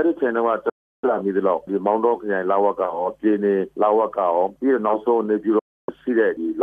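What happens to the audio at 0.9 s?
At 0.9 s the audio is inside a digital broadcast dropout running from 0.70 to 1.04 s. The receiver muted after losing good frames, fading out in about 3 ms to true silence, and about 0.34 s of programme is gone, which fits roughly 14 frames. Unlike concealment, there's no repeated or smeared fill.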